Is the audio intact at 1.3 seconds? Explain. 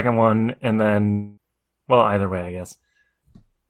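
No. At 1.3 seconds the clip sits inside what is likely a long network dropout, running from 1.11 to 1.39 s, where incoming audio stopped for about 0.26 s. The receiver covered nearly the whole gap by stretching the last sound it had, so instead of silence there is a smeared buzz and hiss carrying on from before 1.11 s. Speech resumes at 1.39 s with that quarter-second permanently missing.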